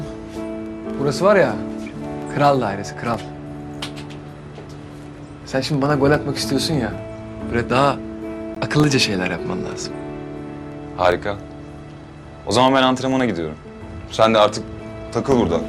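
At 8.55 s, a gap at a join of encoded pieces: separately encoded segments, joined every 10 s, keep encoder delay and padding, leaving an 18 ms silence with smeared edges.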